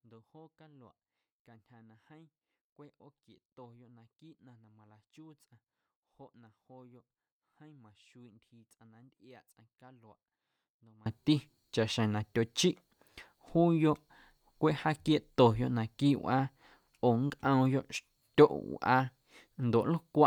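From the start to 11.06 s, the speech almost disappears when heard in mono. It drops by about 28 dB and is left faint. The likely cause is one channel inverted. One side of the stereo pair has its polarity flipped. The centred voice is common to both channels, so it cancels when they are summed. Only the small difference between the channels survives. After 11.06 s, the full level returns.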